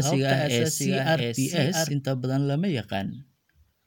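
A second, slower capture path or a misaligned edit likely mixed the speech in twice: a full-band doubled audio track, about 0.7 s late and about 5 dB quieter, with no decay or room colour, runs from the start and stops abruptly at 1.92 s.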